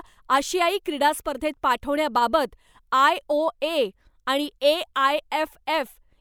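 Speech recording with no audible technical faults.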